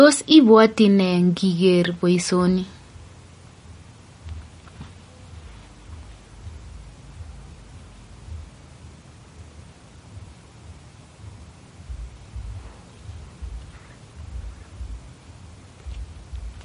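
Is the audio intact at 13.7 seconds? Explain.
No, at 13.7 s the speech carries MP3 compression damage, present throughout the clip. The treble stops dead at about 10.6 kHz, and weak frequency lines switch on and off between frames, giving a watery, swirly quality. A spectrogram shows a flat ceiling there with speckled gaps below, likely from low-bitrate encoding around 40 kbps.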